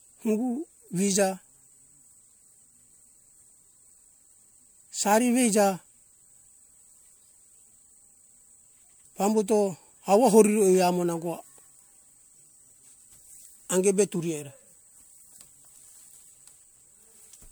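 From start to finish the speech carries a swirly, smeared, hollow quality that goes beyond what a single lossy encode at this rate would produce, and consonant attacks sound blurred. The pattern is typical of generation loss, likely from encoding with MP3 at around 96 kbit/s about three times in a row. Each pass quantises on a shifted frame grid, so the noise and spectral holes build up. The bandwidth extends to about 20.1 kHz.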